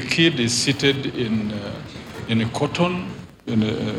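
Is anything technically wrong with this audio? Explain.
Yes. Wi-Fi interference runs through the whole clip. A Wi-Fi radio sits close to the audio circuit. Its beacon transmissions get picked up and rectified into the audio path. The beacon repeats every 102.4 ms. That gives a steady ticking just under ten times a second. The ticks are regular and mechanical. They sit well below the main sound, roughly 30 dB down.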